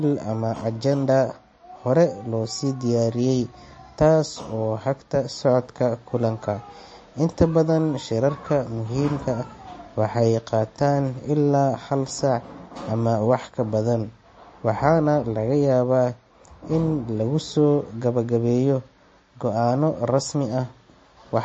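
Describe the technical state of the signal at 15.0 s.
At 15.0 s the speech carries the same damage heard through the whole clip, with nothing above about 8.3 kHz and a watery, swirling texture, likely MP3 compression at a low bitrate of about 33 kbps. The encoder cuts the treble at a fixed point and drops weak frequency lines, which flicker on and off between frames, so s sounds chirp metallically and consonant attacks smear. A plain low-pass filter would dull the top without that flickering swirl.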